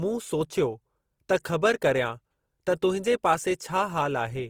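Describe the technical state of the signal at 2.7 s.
At 2.7 s, as throughout, the speech shows low-bitrate audio saved at a high bitrate: the artefacts of an earlier lean encoding persist inside a 256 kbit/s MP3. Unlike an ordinary low-bitrate file, content reaches about 20.2 kHz, likely a re-encoded low-bitrate Opus source.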